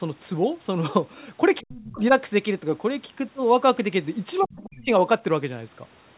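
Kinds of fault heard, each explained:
clock slip clicks: Two devices likely run on unmatched clocks, about 100 parts per million apart, so one sample slips each time the drift adds up to a whole sample. This leaves faint, regular ticks roughly every third of a second throughout the speech.
other side's voice leaking through: The echo canceller likely left part of the far end's loudspeaker sound in the microphone signal. A faint second voice comes through, well below the talker, from 1.59 to 1.95 s and briefly from 4.42 to 4.56 s.
speech suppressed in double talk: With both sides talking at once, the echo canceller likely could not separate its own talker from the echo and turned both down. The speech dips sharply, by up to about 40 dB, from 1.62 to 2.13 s and from 4.4 to 4.89 s.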